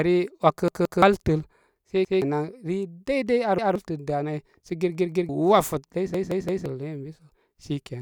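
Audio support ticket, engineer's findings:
Repeated buffer: speech stutters at 0.68–1.02 s, 2.05–2.22 s, 3.58–3.76 s, 4.95–5.29 s and 6.14–6.66 s. The same ~171 ms chunk replays 2, 1, 1, 2 and 3 extra times, which fits an 8192-sample output buffer. Probable playback underrun: new data arrived late, so the device re-sent its last buffer. Roughly 0.15–0.5 s of speech lost per event. Spectrogram shows identical tiled blocks with hard vertical edges at each join. Waveform shows copy-pasted segments with discontinuities.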